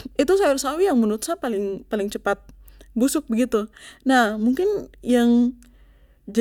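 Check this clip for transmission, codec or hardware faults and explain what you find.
No transmission, codec or hardware problems can be heard in the speech; the signal stays continuous throughout.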